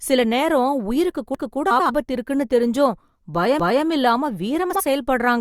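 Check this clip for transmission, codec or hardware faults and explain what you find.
Two kinds of fault are audible in the speech: overlapping chunks twice and frames out of order twice.

Overlapping chunks, 1.35 to 1.60 s and 3.60 to 3.85 s: chunks 2 s apart each begin 250 ms before the previous one ended, so that quarter-second replays as a stutter. On a waveform or spectrogram, the same 250 ms pattern appears twice in a row, with a hard edge at the join.

Frames out of order, 1.70 to 1.90 s and 4.70 to 4.80 s: two adjacent blocks were decoded in swapped order. They are about 93 ms each at the first spot, between "உயிருக்கு கூட" and "இருக்குனு தெரிஞ்சும்", and about 46 ms each at the second. The sound flutters. A spectrogram shows formant tracks jumping at three vertical seams, with no lost time.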